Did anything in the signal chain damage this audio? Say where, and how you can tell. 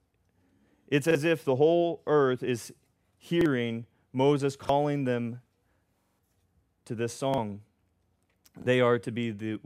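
Yes, a repeated buffer at the driver or buffer stage. A 43 ms piece plays twice at 1.11 s (before "if the whole earth"), 3.41, 4.65, 7.34 (after "to this") and 8.62 s, and five times at 6.02–6.19 s. Late data forced replays, which fits a 2048-sample buffer. A dropout would leave silence, not hard-joined stutters.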